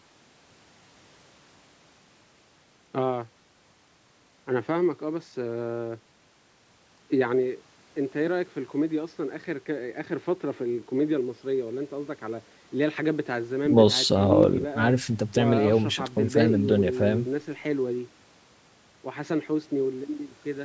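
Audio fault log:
Nothing's wrong here: the speech has simply been through a call's microphone processing, which trims the deepest bass and leaves nothing above 8 kHz, and that's exactly what it's meant to do.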